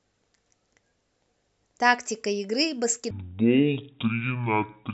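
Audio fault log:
3.11–4.93 s wrong sample rate: the speech drops a full octave and runs at half speed, which fits 48 kHz audio played back at 24 kHz.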